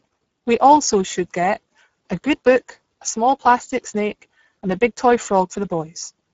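A speech recording with Speex codec damage from start to finish. The artefacts are plainly audible. The voice sounds noisy and hoarse, with a rough, buzzy edge. Speex is a CELP codec that models speech with a vocal-tract filter and a coded excitation. Here too few bits go to that excitation, so detail is lost. The damage points to a low rate near 10 kbps. Nothing is present above 7.6 kHz.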